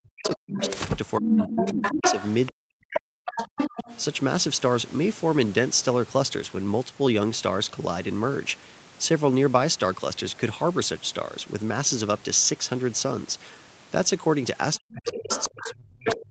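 From 0.0 to 0.6 s the talker's speech is pulled down hard, dropping by roughly 40 dB across about half a second, and from 0.23 to 0.78 s a second voice leaks in underneath at about 5 dB below the talker. The same pairing returns from 1.19 to 3.58 s, with about 1.5 s of deep dips, while the foreign voice, from 1.38 to 4.01 s, sits at roughly equal level to the talker. At the end, from 14.75 s to the close, the leak again runs about 5 dB down, and from 14.78 s the talker is suppressed once more. This is speech suppressed in double talk, likely because the echo canceller could not separate the talker from the loudspeaker echo and ducked everything while both sides spoke. Unlike a plain dropout, the gaps track the other voice's activity.

That second voice is the other side's voice leaking through. It is likely residual loudspeaker echo that the canceller failed to subtract. It differs from crosstalk or a second person in the room because it appears largely in the stretches where the suppression is fighting it.

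At 6.43 to 6.45 s and again at 8.49 to 8.51 s, a single 20 ms frame turns briefly rougher and noisier with no gap. Each is a lost packet rebuilt from error correction: Opus decoded the low-bitrate copy carried in the following packet. A concealed loss would instead smear or buzz, and an unrepaired one would click or go silent. Because this call is already limited to 8 kHz, there is no extra top-end dip.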